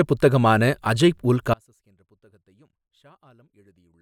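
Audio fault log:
1.54 s to the end: audio dropout to a faint residue. The path likely lost the wanted signal while the chain after the break stayed live, so the speech stops abruptly mid-flow rather than pausing or fading. What fills the remaining time is not silence but a faint leak of the sound, sitting roughly 35 dB below its normal level, and it never recovers before the clip ends.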